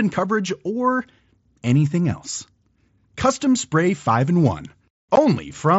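Speech over a wideband mSBC Bluetooth headset link, with light graininess on louder sounds. At 5.16 s there is unconcealed Bluetooth headset packet loss. About 15 ms of sound drops out, which fits two lost packets. The gap has hard edges.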